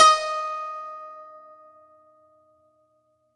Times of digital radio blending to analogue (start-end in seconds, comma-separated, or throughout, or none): none